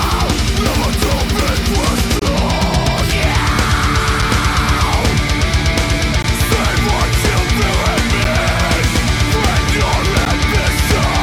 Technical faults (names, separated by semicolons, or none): gap between stream segments